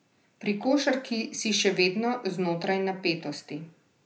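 No technical faults are audible anywhere in the speech.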